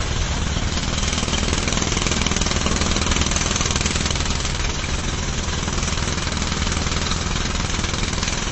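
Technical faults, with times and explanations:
Throughout: transcoding between lossy codecs. Nothing reaches above 8.2 kHz, and several distinct kinds of coding damage sit on top of one another: smeared, swirling texture alongside the granular, metallic roughness of a low-rate MP3. This is likely a chain of low-bitrate codecs, with the artefacts pointing to something like Vorbis, then Opus, then MP3. Each stage spent its scarce bits re-encoding the previous stage's errors while adding its own, and the lowest band limit in the chain remained.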